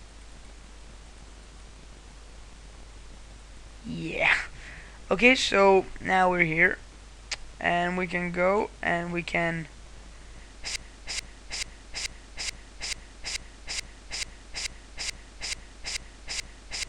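At 10.76 s the audio locks into a broken-record loop. A fragment about 0.43 s long repeats exactly, back to back, 14 times. It never releases and runs right to the end of the clip. The effect is a rigid, stuttering cycle with no variation between passes. Whatever should have played in those last seconds is gone. The likely cause is a player, encoder or stream stalling and resending the last piece it held.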